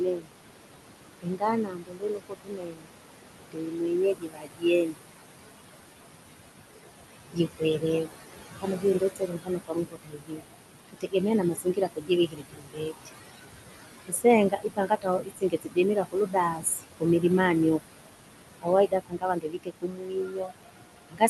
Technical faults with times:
0.00-21.30 noise suppressor artifacts
0.00-0.29 speech cut by the noise suppressor
1.21-2.91 speech cut by the noise suppressor
3.52-5.00 speech cut by the noise suppressor
7.33-13.09 speech cut by the noise suppressor
14.06-17.24 speech cut by the noise suppressor
18.54-21.30 speech cut by the noise suppressor

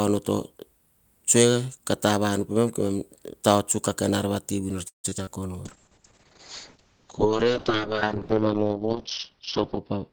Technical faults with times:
4.87-5.40 repeated packet loss (robotic sound)
5.67-10.12 call bitrate drop

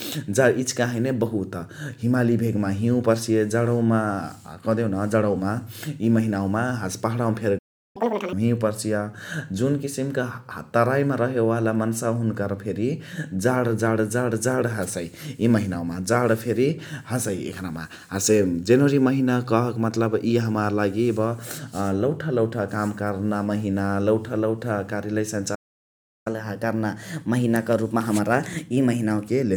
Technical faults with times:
7.58-7.96 playback stall
7.96-8.33 catch-up at higher speed
25.55-26.27 playback stall
26.27-29.27 catch-up at higher speed

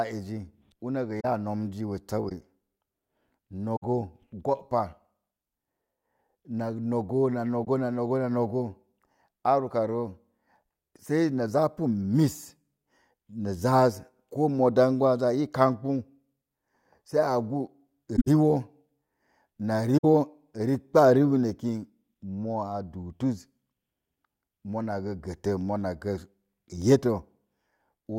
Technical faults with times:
1.20-1.25 corrupt frame concealed
2.28-2.32 corrupt frame concealed
3.76-3.83 corrupt frame concealed
7.64-7.67 corrupt frame concealed
18.16-18.27 corrupt frame concealed
19.97-20.05 corrupt frame concealed

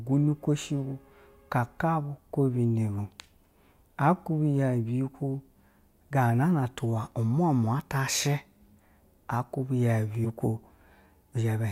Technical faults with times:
2.98 compressed frames skipped
7.79 compressed frames skipped
10.24-10.26 compressed frames skipped

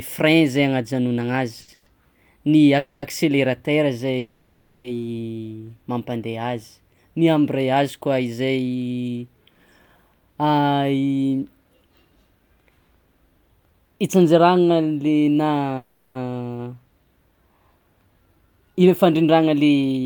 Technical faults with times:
1.61-1.70 short stall from a late packet
1.74-1.88 call audio freeze
2.78-3.04 call audio freeze
4.18-4.86 call audio freeze
10.14-10.59 jitter buffer speed-up
15.77-16.17 call audio freeze
18.25-20.00 jitter buffer speed-up

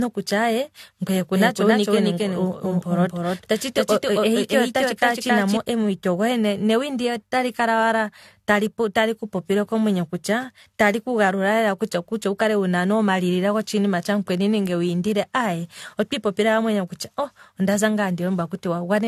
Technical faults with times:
0.00-19.08 generation loss
1.35-5.57 doubled audio track

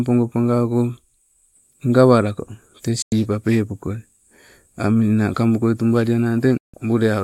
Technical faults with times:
3.02-3.12 digital broadcast dropout
6.57-6.74 digital broadcast dropout

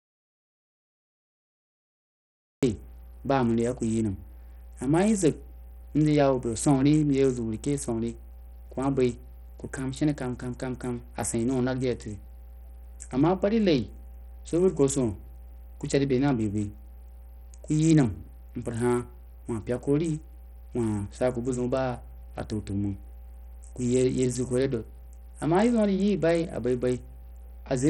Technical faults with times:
0.00-27.90 mains hum
0.00-27.90 Bluetooth SBC compression
0.00-2.63 audio dropout to silence

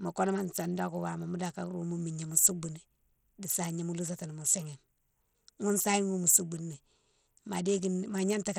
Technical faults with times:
0.00-8.58 Bluetooth SBC compression

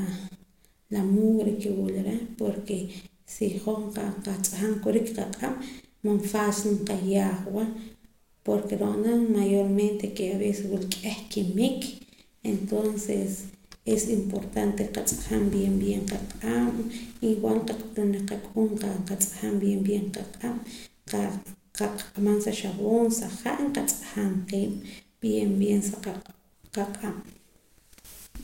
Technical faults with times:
none

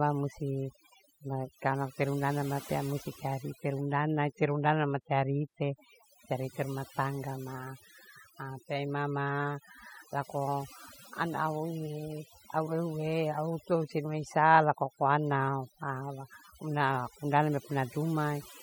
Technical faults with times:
0.00-18.63 overdone noise removal

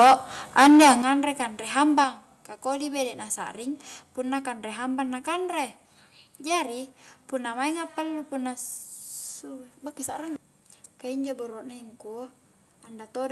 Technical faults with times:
0.00-0.14 microphone overload
0.57-0.93 microphone overload
1.02 microphone volume stepped down
1.98-2.01 microphone overload
2.04 microphone volume stepped down

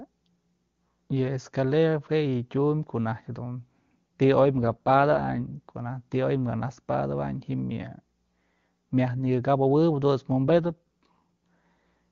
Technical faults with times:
4.40-5.56 AMR rate drop
10.48-11.19 AMR rate drop

